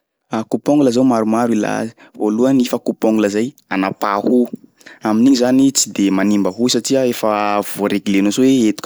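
Nothing's technically wrong with this speech recording; there's no fault to point to anywhere in it.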